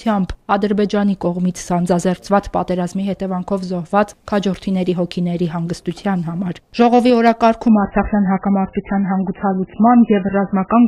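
At 7.28 s a single sharp click cuts across the sound, likely from dropped samples: a handful of samples, well under a millisecond, went missing, so the waveform jumps. Nothing audible is lost, which separates it from a dropout with a gap. From 7.68 s to the end, the adaptive stream switches to a lower bitrate. Codec artefacts rise, consistent with a fall from a mid-rate MP3 to a very low one. The change is abrupt but leaves no gap. A second identical click at 8.47 s likely comes from the same kind of sample loss.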